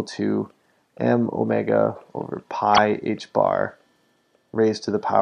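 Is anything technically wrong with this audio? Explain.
Yes, there's a corrupt frame decoded from 2.74 to 2.79 s: damaged bits in a few frames got played anyway, putting energy at the wrong frequencies for a short glitch.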